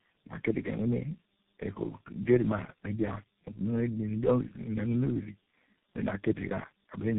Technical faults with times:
0.00-7.18 tandem speech coding

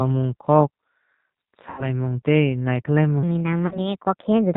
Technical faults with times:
0.00-4.56 G.729 codec
1.70-1.88 VoIP packet loss concealed by the speech codec
3.23-4.56 section at the wrong speed
3.67-3.89 VoIP packet loss concealed by the speech codec

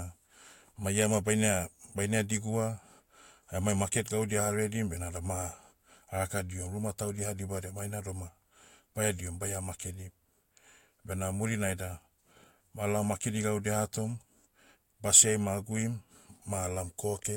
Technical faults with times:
none

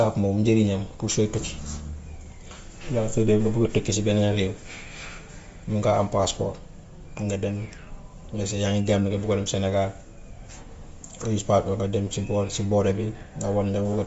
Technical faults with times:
0.00-14.06 Bluetooth LC3 compression

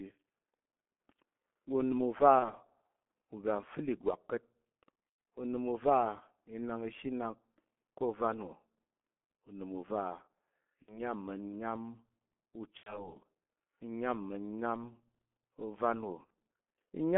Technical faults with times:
0.00-17.17 G.723.1 codec
2.39-2.52 VoIP packet loss concealed by the speech codec
5.09-5.18 VoIP packet loss concealed by the speech codec
10.82-11.01 VoIP packet loss concealed by the speech codec
12.77-13.14 VoIP packet loss concealed by the speech codec
16.25-16.29 VoIP packet loss concealed by the speech codec

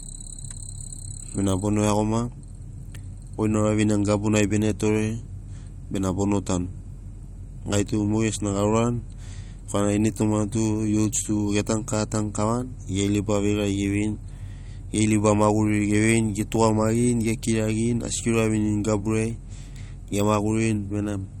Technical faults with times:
0.00-21.40 MP3 compression

